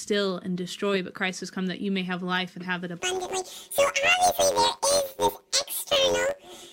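From 3.00 s, just after "life and have it", to the end, planar audio is read as interleaved: blocks of about 10.9 ms that store all left samples, then all right, are taken as alternating pairs. Each block replays twice at double speed, giving a robotic buzz near 92 Hz without a clear octave shift.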